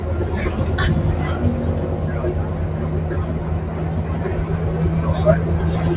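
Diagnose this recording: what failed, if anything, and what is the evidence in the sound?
The failure is in call processing: a noise suppressor applied to music or sounds. Throughout the clip, held parts and tails drop by around 5 dB while attacks pass. The sound pumps and thins. A speech-tuned suppressor is treating steady content as noise.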